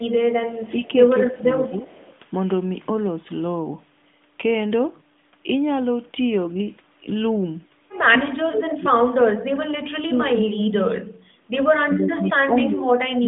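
From 0.00 to 2.14 s an echo leak returns a copy of the speech 192 ms late, about 15 dB down, likely from an echo canceller leaving loudspeaker pickup in the return path. Within it, 0.71 to 1.83 s shows speech suppressed in double talk, the level dipping by about 10 dB as the canceller likely mistakes overlapping talk for echo. Deeper suppression follows from 8.07 to 11.16 s, near 40 dB, and from 11.75 s to the end, around 30 dB. The echo leak returns at 12.62 to 13.18 s, same 192 ms delay, about 10 dB below the speech.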